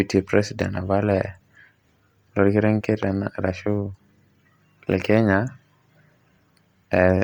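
Throughout the speech, the upper frequencies sound breathy and grainy, with a hiss-like fill where fine detail should be, though the band still reaches about 20.1 kHz. This is likely Bluetooth LC3 compression, its heavy damage fitting a bitrate near 32 kbps with 10 ms frames.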